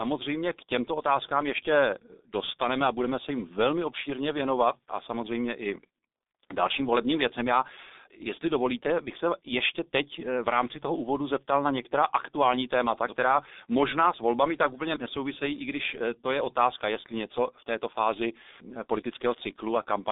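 Throughout, the speech sounds muffled and hoarse with smeared consonants and nothing above 3.8 kHz: heavy G.723.1 codec damage, consistent with a rate near 6 kbit/s.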